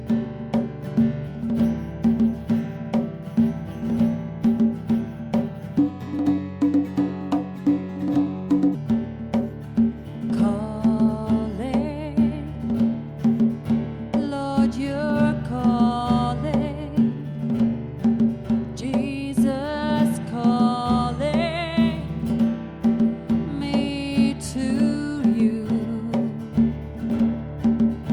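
From 5.79 to 8.75 s there's a section at the wrong speed, running 1.27 times fast and up about four semitones, likely from a clock or rate mismatch.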